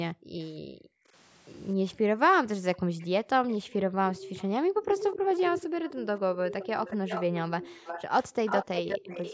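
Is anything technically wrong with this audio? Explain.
Yes. Two kinds of fault are present in this speech clip.

Background gated by the echo canceller occurs three times: 0.14 to 1.13 s, 1.95 to 4.02 s, and 4.64 to 5.75 s. The room sound falls away sharply, by about 40 dB at its deepest. Within each span the affected time totals roughly 0.7 s, 0.7 s and 0.4 s respectively. The echo canceller judged the loudspeaker to be active and cut the microphone hard. The background then returns as it releases.

An echo leak runs from 3.0 s to the end. A delayed copy of the speech trails the original by about 0.25 s. It sits roughly 10 dB below the main speech. It likely comes from a far end playing the call on a loudspeaker. That side's echo canceller failed to remove its microphone's pickup of the speaker, and the residue was sent back. The band-limited sound, with nothing above 8 kHz, fits normal call processing.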